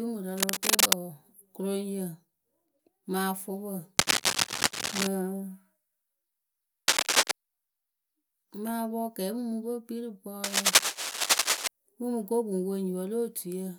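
Bursts of cable scratch noise cover the speech from 0.36 to 0.93 s, 3.98 to 5.07 s, 6.88 to 7.32 s and 10.44 to 11.68 s. These are rough scratching and rustling sounds, a little louder than the voice, and clearly louder around 6.9 s. The likely cause is a worn cable or connector being moved, so its contact resistance jumps about. A spectrogram shows broadband, ragged vertical smears. The waveform shows dense, irregular spikes on top of the speech.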